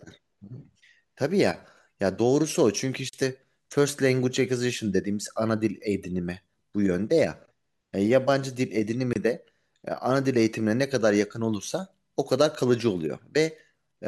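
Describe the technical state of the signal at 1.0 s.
The audio is intact at 1.0 s, with no audible fault at that moment.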